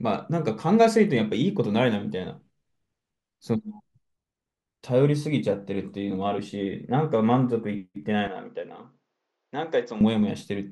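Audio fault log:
8.27–10.01 s: likely an input switched to a poorer device. The level drops by about 10 dB, nothing above 7.4 kHz passes, and a faint new noise floor appears, with no gap.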